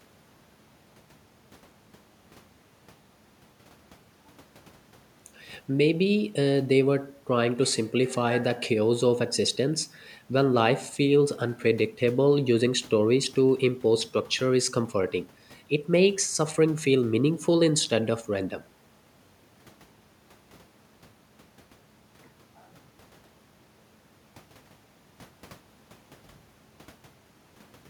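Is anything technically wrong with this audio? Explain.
No, nothing technically wrong stood out on listening to this speech recording.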